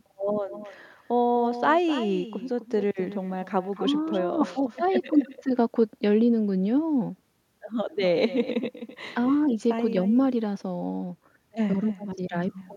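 A speech clip with echo with no canceller running through its whole length: every phrase is followed roughly 300 ms later by a copy about 12 dB quieter and thinner, because the far end's loudspeaker feeds its microphone and nothing subtracts that path before sending it back. On a spectrogram each syllable's harmonics reappear as a fainter, band-limited ghost shifted right; the waveform shows smaller trailing bursts filling the gaps after each phrase.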